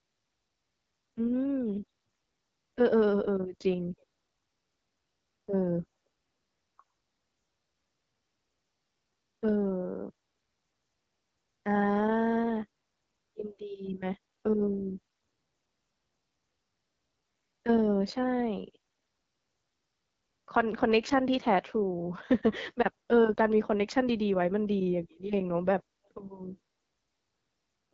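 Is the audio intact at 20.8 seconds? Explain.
No. At 20.8 s, as throughout the clip, the AMR wideband (HD Voice) codec is at work. It models speech with a pulse-excited vocal tract filter and fills the top band with shaped noise. The plainly rough, raspy texture fits its low 8.85 kbit/s mode, and nothing is left above 7.6 kHz.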